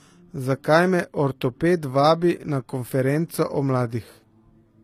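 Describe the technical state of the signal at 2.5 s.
At 2.5 s the speech carries the same coding damage heard across the whole clip, most likely HE-AAC compression at a low bitrate, around 24 kbps. Nothing is present above 14.9 kHz, and the treble below that is not original: spectral band replication rebuilt it by copying lower bands upward under a coarse envelope. Harmonics therefore misalign across the crossover, and s sounds come out gritty, metallic or lispy.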